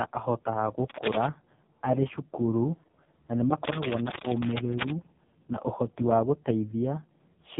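From start to finish the speech has gone through the AMR narrowband mobile codec at its lowest 4.75 kbps mode, so it's heavily damaged: nothing gets through above about 3.8 kHz, and with so few pulses per frame to drive the vocal-tract model the voice comes out buzzy, thin and noticeably synthetic.

Then from 3.64 to 4.92 s there's a rough, uneven burst of scratchy rustling laid right over the talking, roughly as loud as the speech itself. That's cable scratch noise, most likely a worn lead or connector being moved so its contact resistance jitters.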